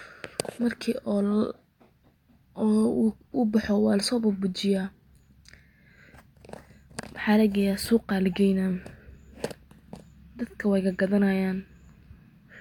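No technical faults can be heard anywhere in this speech recording.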